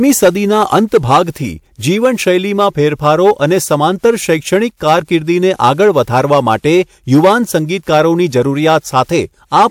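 The whole speech clip has hard clipping: the signal was pushed about 8 dB past what some stage could pass, so the loudest moments, around a couple of percent of the samples, got their peaks sliced flat, spraying extra harmonics high into the spectrum as distortion riding on those peaks.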